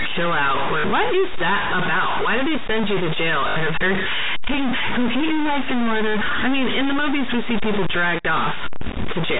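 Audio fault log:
throughout: stuck bit. The likely cause is one data bit held at a fixed value by a broken line or converter, so about half the samples are pushed off by that bit's weight in a pattern set by the waveform. The speech carries distortion, and the pauses fill with noise because the bit flips with the sign of small values. This is on top of the telephone band limit of the G.711 line.
0.80–0.84 s and 3.48–3.56 s: packet loss with last packet repeated. Audio went missing for 40 ms and then 80 ms, and the receiver replayed the last good packet until fresh data arrived. Both gaps fit 20 ms packets, two lost and then four. The longer run buzzes at about 50 Hz, heard as a brief robotic stutter.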